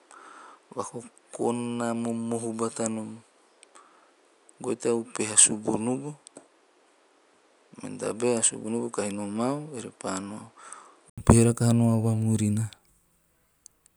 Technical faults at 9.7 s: input switched to a poorer device

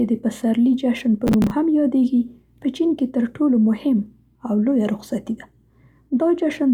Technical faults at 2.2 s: none

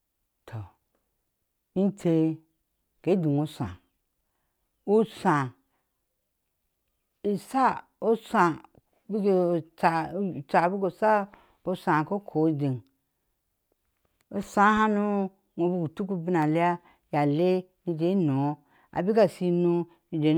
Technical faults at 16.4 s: block of digital silence

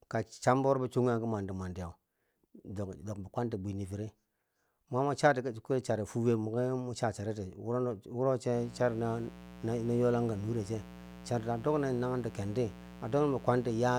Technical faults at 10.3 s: mains buzz

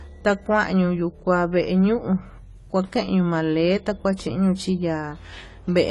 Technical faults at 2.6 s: AAC compression

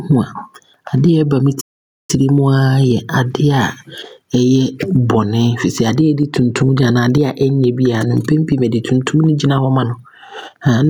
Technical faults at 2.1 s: gain pumping; playback stall

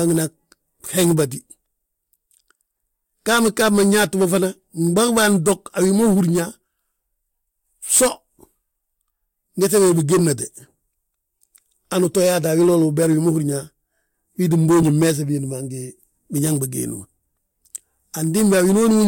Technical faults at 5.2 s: none

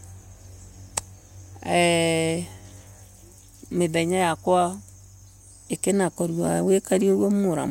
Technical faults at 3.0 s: none

